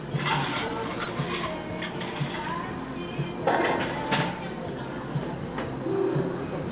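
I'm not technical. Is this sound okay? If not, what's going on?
No. Just after the one-second mark, from about 1.04 to 1.09 s, the sound briefly hangs, with a tiny smear or flutter where it should move on. This is a short stall from a late packet. A piece of audio arrived late, so the playback stretched the previous bit for about 18 ms to cover the gap, then carried on. Nothing is lost, but everything after plays slightly later. The phone-style call path also removes everything above 4 kHz.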